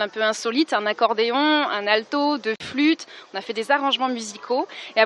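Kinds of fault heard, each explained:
Gap at a join of encoded pieces: a 46 ms gap at 2.56 s from untrimmed encoder padding; unlike a dropout, the sound resumes exactly where it stopped.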